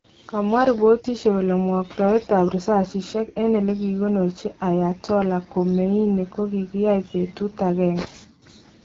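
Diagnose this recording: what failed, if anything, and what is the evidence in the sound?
The fault sits at the codec stage and runs through the whole speech clip: this is the AMR wideband (HD Voice) codec at a low rate. The speech has a plainly audible rough, raspy texture, which points to one of the two lowest AMR-WB modes, around 8.85 kbit/s. The model builds speech below 6.4 kHz from a coarse pulse excitation and pads the top band with shaped noise, and nothing reaches above about 7.5 kHz. That wider ceiling separates it from narrowband AMR, which stops near 3.4 kHz.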